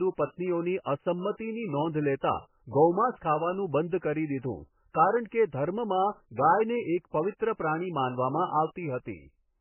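A speech recording that was likely squeezed through heavy MP3 compression, with a bitrate starved enough to suggest roughly 10 kbps, runs from start to finish. The encoder has cut everything above 3 kHz, leaving the speech dull and band-limited, and the sparse remaining frequency lines flicker between frames, giving a watery, swirling texture with smeared attacks. Pre-echo appears at 2.21 s, where the codec spread quantisation noise from a sharp onset back across its block, so a short hiss of about 17 ms precedes the attack and blurs it.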